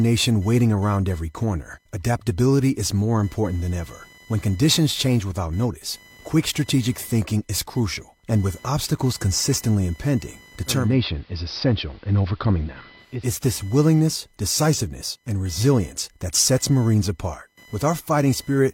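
A speech recording carries computer activity noise for its full length: a buzzy, chirping whine pulsing at roughly 1 kHz, sitting around 30 dB below the speech. Processor, graphics or mouse load is pulling on a ground shared with the audio circuit, so the interference follows the machine's activity rather than the talker. On a spectrogram it would show as a thin horizontal line near 1 kHz, with fainter harmonics stacked above, running straight through the pauses. The waveform would show a fuzzy floor where silence should be. From about 10.66 s, after "with obstacles consistently impending", to about 13.32 s, before "this willingness decisiveness and", there is digital radio blending to analogue. The receiver lost its digital stream and cross-faded over roughly 360 ms to the AM broadcast of the same station, then faded back. Loudness stays the same, but the sound turns dull and a hiss rises to about 35 dB under the speech. 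A spectrogram would show the upper treble cut away across that stretch, with a soft noise wash filling the gaps, and tapered edges where each blend happens.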